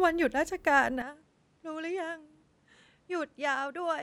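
From 1.02 s the speech turns dull and quieter, cut above 11.1 kHz, with faint new noise. The input likely switched to a poorer device.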